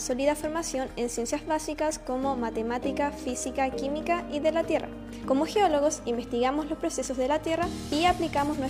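No technical faults can be heard anywhere in the audio, and the signal stays continuous and stable throughout.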